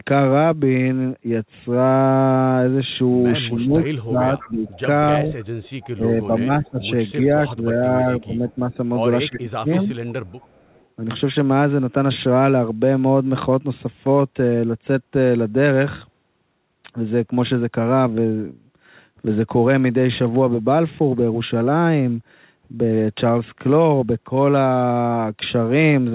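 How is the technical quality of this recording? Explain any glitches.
Two echo-canceller faults affect the recording between about 3.5 and 10.9 s: the speech is pushed down in two stretches, and faint delayed echoes slip through. The band stops at 4 kHz, which fits a G.711 A-law call path at 64 kbps.

Speech suppressed in double talk occurs from 3.48 to 5.33 s and from 5.95 to 9.9 s. The talker's level dips by up to about 20 dB, in pieces adding to roughly a second in the first stretch and two seconds in the second. The likely cause is both ends talking at once, so the canceller couldn't separate this talker from the returning loudspeaker sound and attenuated everything. Unlike a dropout or packet loss, nothing is replaced or smeared. The voice just sinks and recovers in step with the overlap.

Echo leak appears at 4.39–4.81, 5.4–5.9, 6.65–6.81, 8.22–8.53 and 10.27–10.85 s as a faint copy of speech trailing 315 ms behind. 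It is about 20 dB below the speech at first, fading to about 35 dB below by the last one. The likely cause is a loudspeaker end whose canceller left residue that was sent back. The fixed 315 ms gap sets it apart from room reverberation, which decays smoothly rather than repeating as a distinct copy.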